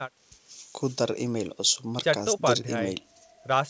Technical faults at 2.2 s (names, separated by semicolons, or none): none